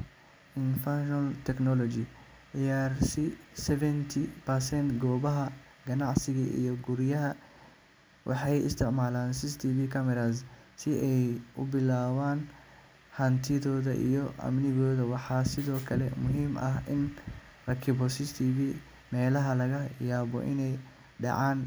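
Nothing in this speech recording jumps out as a technical fault; it just runs along the way it should with nothing to flag.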